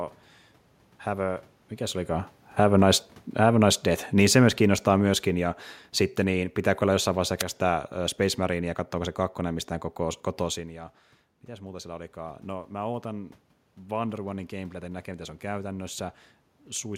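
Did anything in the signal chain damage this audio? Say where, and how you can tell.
Yes. In the call-processing stage, the automatic gain control judged the input too loud or its background noise too strong and turned its gain down gradually, an automatic gain falling of about 7 dB between 2.44 and 5.58 s. It begins after "mikä se olikaan" and has settled by "sitten niin pitääkö olla". The voice and the room noise sink together, which separates it from the talker moving around 2.0 s, where only the voice level shifts.

The second fault sits in the analogue radio link of the wireless microphone, before conversion. At 7.38 to 7.44 s, just after "pitääkö olla jossain vaiheessa", a wireless microphone noise hit appears as a brief burst of static lasting about 55 ms. Reflections cancelled the FM carrier at the receiver, and the receiver noise rose and broke through the speech. The cause is the radio path, not the room.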